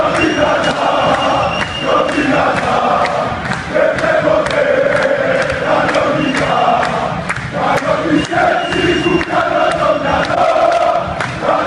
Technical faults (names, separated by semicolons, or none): corrupt frame decoded